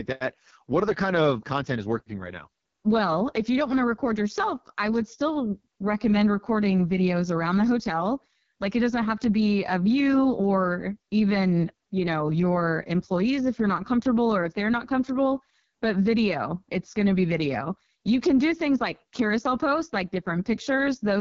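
From start to finish the speech sounds rough and raspy, with a buzzy, gritty edge on voiced sounds and nothing above about 6.8 kHz. This is the AMR wideband (HD Voice) codec running at its bottom rate, which fits 6.6 kbit/s. At that rate the pulse-driven model of the vocal tract has too few bits to capture the voice accurately. The highest band is only synthetic noise.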